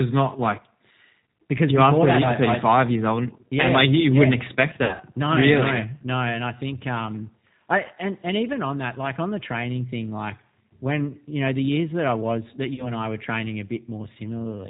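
The whole clip carries G.729 codec damage, plainly audible. The speech is rebuilt from a vocal tract filter and pitch pulses, so it sounds slightly rough and synthetic. Nothing above 4 kHz survives. The sound fits an 8 kbit/s G.729A stream.

VoIP packet loss concealed by the speech codec appears at 4.84 to 5.03 s, after "you yeah wouldn't expect". About 120 ms of audio is missing, scattered over 160 ms, with the longest gap 60 ms. The decoder stretches the last sound into a buzzy tone or coloured noise that fades. A shorter loss of 40 ms follows at 12.74 to 12.91 s, between "that I was that" and "I were training a", and the voice stays weak briefly afterwards.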